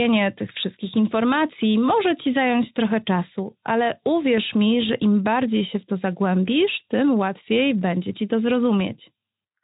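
No technical faults can be heard in this speech clip. It has passed through the Speex codec, which leaves light codec damage and a band that ends at about 3.8 kHz, with nothing above it.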